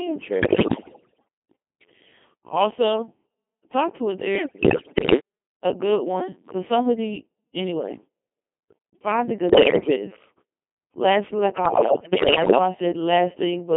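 Codec 2 vocoder, throughout: the speech is heavily damaged by Codec 2, and the dense buzzy texture fits its 2.4 kbit/s mode. Only pitch, voicing, energy and a coarse spectral envelope make it through, and the decoder rebuilds the voice from sine waves rather than the original waveform. The result is robotic and buzzy, held within a narrow band from 200 Hz to 3.4 kHz.

Bit errors on digital voice radio, from 0.42 to 1.23 s, 4.36 to 5.20 s, 9.50 to 9.96 s and 11.66 to 12.58 s: corrupted bits reach the vocoder at a high error rate, roughly 10 to 15 percent. Because each bit sets pitch, level, voicing or spectrum for a whole frame, the synthetic voice lurches in pitch and loudness and shifts in tone colour. It breaks into bleeps, warbles and robotic gibberish, worst in the first and last bursts.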